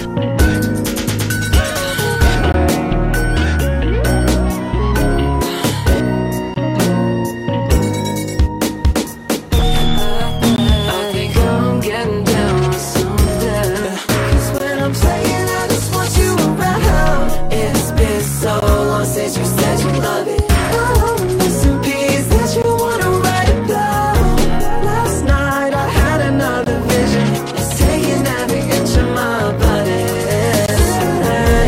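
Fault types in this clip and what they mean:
Gap between chunks: the audio was delivered in 4 s blocks, and silence was left at each join. This leaves a 20 ms hard-edged hole of silence every 4 s, from 2.52 s through 30.66 s, with no sound lost.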